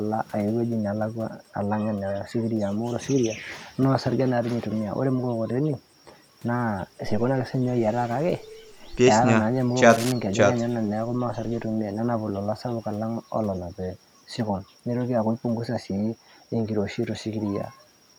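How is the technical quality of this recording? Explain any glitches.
The recording has one audible glitch, a burst of cable scratch noise. It runs from about 9.89 to 10.12 s, roughly a quarter of a second. Dense, ragged crackle sits over the speech there, only around 10 dB below it, so it is easy to hear. The likely cause is a worn cable or connector being moved. Its contact resistance jumps about rapidly, and those fluctuations ride on the signal as scratchy, rustling noise.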